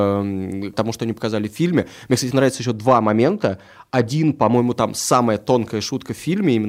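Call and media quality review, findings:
De-emphasis applied wrongly, 2.55–4.55 s, ending just before "там самая". Speech turns dull and muffled; smooth treble roll-off, about 8 dB down at 10 kHz re 1 kHz. Likely de-emphasis filter on non-pre-emphasised path. Gradual slope, not a sharp low-pass cutoff.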